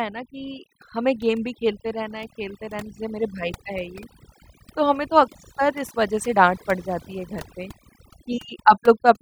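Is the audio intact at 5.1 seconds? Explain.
No. At 5.1 seconds the background between syllables has dropped to near silence with twinkling specks in it. This is overdone noise removal, present across the whole clip rather than just this moment. A noise reduction stage was set too aggressively: each frequency band that comes close to its noise estimate is pushed far down or switched off, and the quieter parts of the speech are removed along with the noise.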